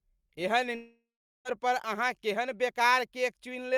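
A long network dropout runs from 0.75 s to 1.47 s, just before "पर अहाँ केहन". The speech breaks off and the last sound is drawn out into a fading buzzy hiss, which then gives way to about 0.38 s of near silence before the talker returns. This is likely a stretch of about 0.7 s of audio that never reached the receiver, which filled the gap by extending what it had and then going quiet, so that part of the speech is simply lost.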